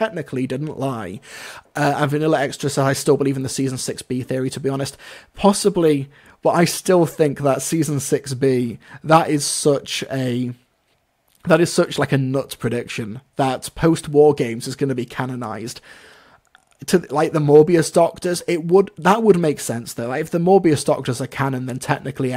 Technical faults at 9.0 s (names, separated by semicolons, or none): none